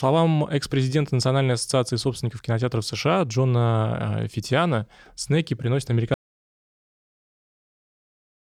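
At 6.14 s, just after "снеки приносят", the speech stops mid-flow in an audio dropout to silence that runs to the end. The input was likely lost, with the recorder still writing silence. There is no room tone: the waveform is flat and the spectrogram is blank.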